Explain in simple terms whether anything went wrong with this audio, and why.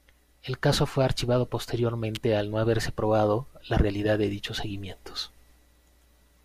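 An electrical switching spike hits at 2.15 s, just before "al no haberse probado": a sharp snap riding on top of the speech. It was likely caused by a nearby switch, motor or static spark arcing briefly, with the recording line picking up that burst.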